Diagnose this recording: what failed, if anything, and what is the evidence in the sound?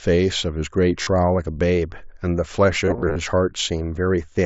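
Concealed Bluetooth headset packet loss on the wireless link at 1.02 to 1.07 s and 2.85 to 3.16 s: lost packets are filled by repeating recent waveform, giving brief buzzy, warbling patches.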